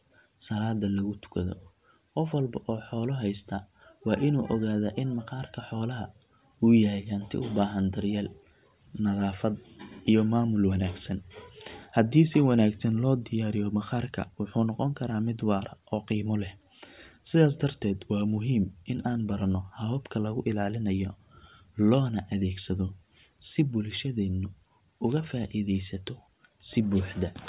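No technical faults are audible.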